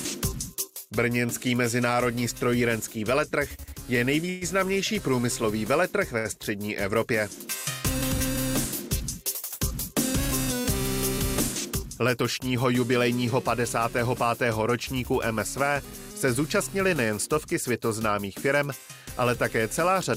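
At 4.29 to 4.43 s the sound freezes for about 121 ms: the last sound is carried on as a fading buzz or hiss, then resumes where it stopped with nothing lost. This call audio freeze is likely caused by delayed packets draining the jitter buffer.

At 6.18 to 6.27 s a short stall from a late packet holds the sound for about 63 ms. The receiver stretched the last sound while it waited for the overdue packet, leaving a slight buzz or dip before continuing.

Jitter buffer speed-up occurs at 12.02 to 12.65 s, running at 107% and removing roughly 50 ms, and again at 16.27 to 17.05 s at 104%, removing around 40 ms. Short pitch-period slices were cut to shrink excess buffered delay, so the sound runs faster at unchanged pitch.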